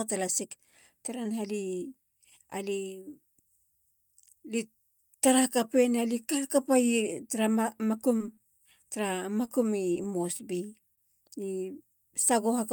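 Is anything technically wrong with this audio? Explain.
Yes, the speech has packet-loss damage and one playback stall.

Short concealed packet loss occurs five times: at 8.17 to 8.22 s, 8.34 to 8.46 s, 9.45 to 9.49 s, 9.93 to 10.07 s and 10.37 to 10.41 s. Each time, about 20 ms of audio never arrived, and the receiver bridged the gap with 17 to 27 ms of synthesized continuation before blending back into real audio. At 8.34 s the patch adds roughly 20 ms of extra length, and at 9.93 s a few milliseconds. Each one is heard as a brief smear or wobble where a sliver of the speech is lost.

A short stall from a late packet occurs at 10.95 to 10.99 s. A packet arrived late and the jitter buffer emptied, so the receiver stretched the current sound by 25 ms until the packet turned up, then resumed from the same point. Nothing is lost. Instead, the sound is held slightly too long, and everything after it plays about 25 ms later.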